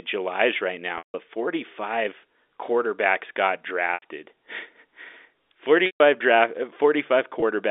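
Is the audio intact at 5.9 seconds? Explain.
No. Packet loss with pitch repetition runs from 5.86 to 6.00 s, a 140 ms gap consistent with seven 20 ms packets. The receiver repeats the last pitch period, fading it out over about 50 ms into silence, then cross-fades back into the narrowband telephone audio.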